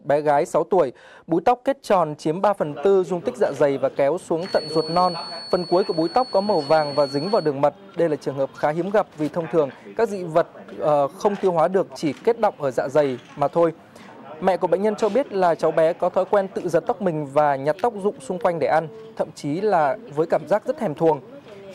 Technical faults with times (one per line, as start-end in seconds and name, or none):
4.35-7.54 feedback whistle